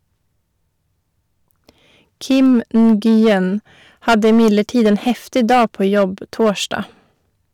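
Hard clipping hits three times: 2.31 to 3.35 s, pushed about 5 dB over; 4.08 to 6.04 s, about 11 dB over and harshly fuzzy; then 6.40 to 6.74 s, about 4 dB, with speech peaks sheared flat into crackle.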